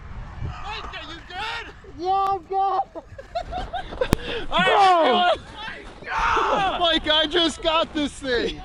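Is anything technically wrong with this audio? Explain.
Yes. At 4.13 s there is a case of invalid numbers at full scale. A calculation produced infinite or invalid values, which were clamped to the largest possible sample value. The output stayed pinned there for about 1.45 ms, which fits a 64-sample processing block. Because the block is so short, it is heard as a single sharp bang. On a waveform it appears as a brief flat segment stuck at one extreme value, well beyond the audio's peaks, and on a spectrogram as a thin vertical line across all frequencies.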